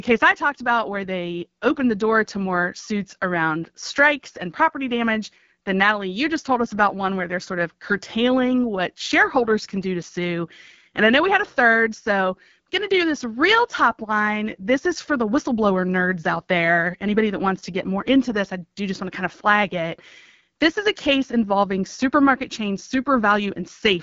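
From start to end, the speech carries AMR wideband (HD Voice) codec damage. The band stops at 7.2 kHz, with nothing above. The codec models the voice as pulses driving a vocal tract filter up to 6.4 kHz. It fills the top sliver with shaped noise. The roughness points to one of its lowest rates, which fits 8.85 kbit/s. The damage is plainly audible. Speech sounds rough and raspy throughout.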